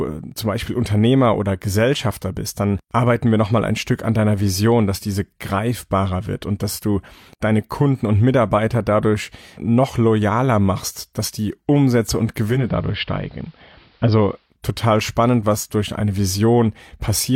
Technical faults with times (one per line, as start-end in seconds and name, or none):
12.45-14.57 digital radio blending to analogue